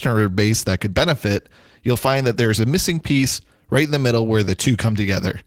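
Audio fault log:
Throughout: clock drift between sender and receiver. The sending side's audio clock runs slow, by roughly 4 percent, against the receiver's. Because samples arrive slightly slower than they are played out, the jitter buffer keeps draining toward empty. The receiver responds by stretching the signal with small repeated fragments. The result is a speech track that never quite holds a steady rhythm. Its pacing sags faintly from start to finish rather than at any single moment.
0.10–5.44 s: repeated timing corrections. Across this span the receiver keeps inserting short repeated slices to stay in step with the slower sender. The playback runs at an effective 96 percent speed. Every edit lengthens the audio, and together they add roughly a fifth of a second. The insertions are unevenly spaced and individually tiny. They come across as slight hiccups and a subtly unsteady, drawn-out tempo in the speech.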